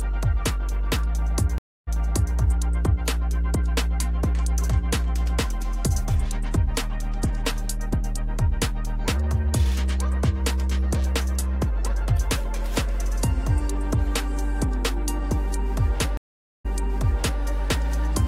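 Twice the sound goes silent and then resumes from a point already heard: at 1.58 s a 0.29 s gap jumps back 0.49 s, and at 16.17 s a 0.47 s gap jumps back 0.77 s. Each is a stream reconnect, where the connection dropped and a fresh decoder restarted on resent audio.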